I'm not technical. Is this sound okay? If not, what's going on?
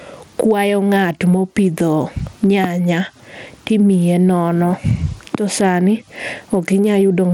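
No. The speech has two problems, and both last the whole clip.

The first is gain pumping. Loud and quiet parts sound squashed together. The likely cause is the microphone level set too high, with an automatic limiter pulling it back hard.

The second is Bluetooth SBC compression. The sound is gritty and rough, and the crisp top end flickers in and out. The damage is easy to hear. It likely comes from the audio passing over a Bluetooth link that squeezes it with the basic SBC codec.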